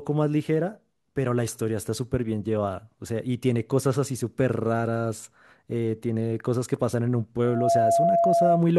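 A microphone is picking up the loudspeaker it feeds, and at 681 Hz the loop gain climbs past one, so from 7.44 s to 8.64 s the speech is overtaken by loudspeaker feedback squeal. That single frequency feeds on itself, swelling over roughly a third of a second into a steady, piercing tone that sits about 5 dB above the speech and holds for just over a second.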